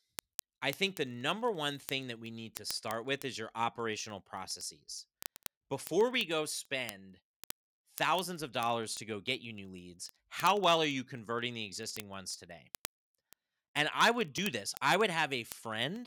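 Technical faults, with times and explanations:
0.12 s to the end: word clock ticks. Sharp ticks of uneven strength repeat roughly every 30 ms. The receiver's unlocked clock drifts about 700 ppm, dropping or repeating one sample per slip.
14.38 s: dropped buffer (overrun). A short jump in the speech, skipping roughly 20 ms. Likely the program read too late and the hardware overwrote those samples.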